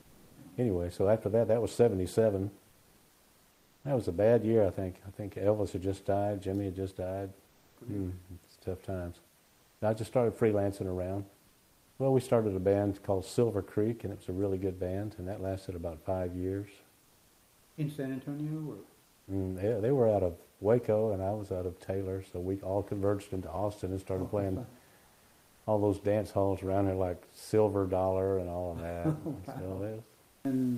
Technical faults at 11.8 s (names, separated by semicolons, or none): comfort noise in place of the background